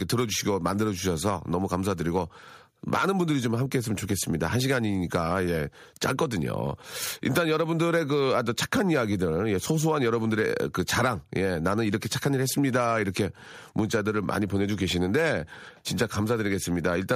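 Nothing goes wrong anywhere in this bit of speech; there's no technical fault to point to at any moment.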